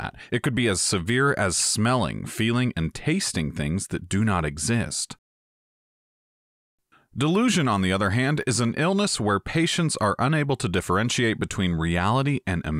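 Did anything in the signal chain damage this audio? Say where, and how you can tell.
Yes, at the driver or buffer stage. At 8.42 s there is a repeated buffer: a very short piece of the sound plays three times in a row with a hard join at each repeat, so it comes across as a brief click or buzz rather than an audible stutter. The repeated slice lasts about 5.3 ms, which fits a 256-sample buffer. New audio arrived late, so the device replayed its last buffer twice, and essentially nothing was lost.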